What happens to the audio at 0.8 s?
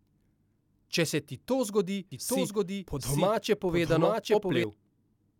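Nothing goes wrong at 0.8 s; the speech there plays through intact, with no dropout, click or distortion.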